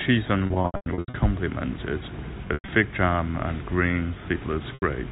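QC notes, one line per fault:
0.46–1.14 s, 2.48–2.68 s and 4.74 s: packet loss with pitch repetition. Gaps totalling 420 ms over 680 ms, then 140 ms over 200 ms, then 80 ms, are bridged by looping the last pitch period. The longest runs of 100 ms hold as a buzzy, frozen tone that fades out into silence before speech returns with a short cross-fade. The narrowband telephone coding is unaffected.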